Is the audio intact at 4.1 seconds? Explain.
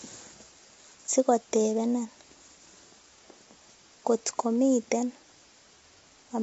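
No, at 4.1 s, as throughout, low-delay AAC compression, likely AAC-ELD at a low bitrate, leaves speech grainy, with a spectrogram showing smeared harmonics and nothing above 7.8 kHz.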